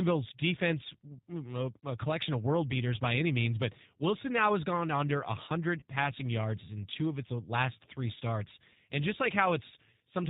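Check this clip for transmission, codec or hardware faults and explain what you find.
Two faults are present: a low-bitrate speech codec across the whole recording, and one short dropout patched by that codec.

The G.729 codec (the G.729A variant, at 8 kbit/s) runs throughout. The speech is rebuilt from a vocal tract filter, a pitch predictor and a few pulses per frame, so it sounds plainly rough and synthetic, with nothing above 4 kHz. Plain band-limiting would not add that buzzy, modelled texture.

VoIP packet loss concealed by the speech codec occurs from 5.80 to 5.83 s, between "now has gone under" and "passing yards in two". About 20 ms of audio went missing, which fits a single lost packet. The decoder filled the gap by extending its last pitch and filter with falling gain, producing a brief smear. A hard dropout would cut to silence or click.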